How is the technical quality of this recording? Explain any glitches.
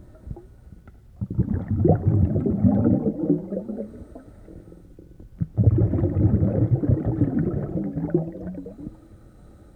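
The technical quality of this recording is sound, and there are no glitches to explain.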